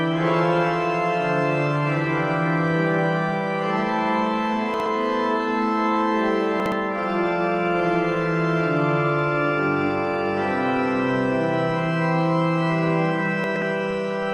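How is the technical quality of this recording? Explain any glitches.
The recording has three glitches, all chunks out of order. At 4.74–4.86 s and 6.60–6.72 s, one 60 ms chunk arrived late and played after the chunk that should follow it. At 13.44–13.62 s, a chunk was two places late. Nothing is lost, but each swap creates hard joins, so the sound briefly jumbles.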